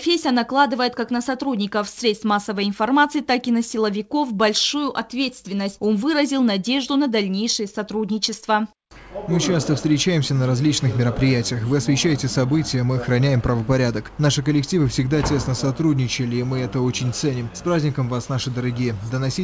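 No technical faults can be heard anywhere in the clip. The sound arrives through a working call path with nothing above 8 kHz, which fits a wideband call codec such as G.722.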